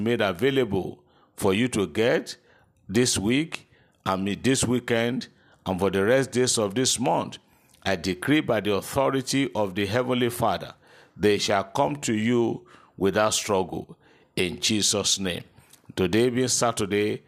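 Nothing in this recording registers as a technical fault.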